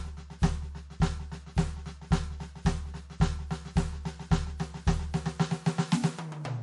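From start to finish, the music carries the marks of transcoding between lossy codecs. Nothing survives above 11.3 kHz, and the artefacts of a low-rate first encode sit under a second codec's own artefacts. A single encode, however coarse, would give one consistent artefact texture. Here two layers overlap, which fits a likely chain of MP3 at around 48 kbit/s followed by WMA at around 96 kbit/s.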